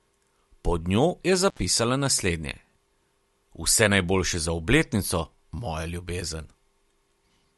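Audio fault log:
1.48–1.59 s, intermittent contact: just after "njo je" the speech breaks up, the line opening for about 65 ms and leaving hiss. Crackle at both edges marks a loose cable or plug, unlike a clean digital dropout or a concealed packet-loss gap.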